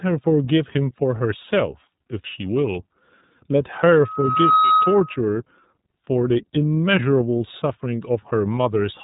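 From start to end the speech carries iLBC codec damage, plainly audible. Nothing above about 3.9 kHz survives, so sibilants lose their edge and the band sounds narrow and boxy. Each frame's excitation is coded independently, giving a slightly rough, synthetic texture to voiced sounds. The character fits iLBC's 30 ms frame mode at 13.33 kbps.

At 4.01 s a loudspeaker feedback squeal begins. A single tone at 1.3 kHz swells out of the signal over roughly three quarters of a second. It settles at about 5 dB above the speech and holds until it cuts off at 5.18 s. The microphone was picking up the loudspeaker it fed, and the loop gain at that one frequency exceeded unity, so the tone kept reinforcing itself until it was limited.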